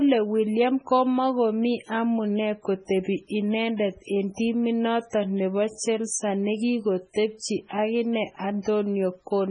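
From start to finish the speech carries heavy MP3 compression damage. Nothing comes through above about 10.4 kHz, and weak frequency lines flicker on and off between frames. That gives a watery, swirly texture with metallic chirps on the s sounds and smeared attacks. It's likely a very low bitrate, around 16 kbps.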